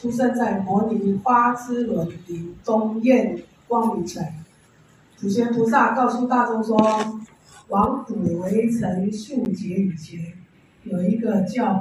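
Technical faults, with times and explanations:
9.45 s, block of digital silence: about 10 ms of samples drop straight to silence and back with no fade, so the abrupt edges come across as a single tick.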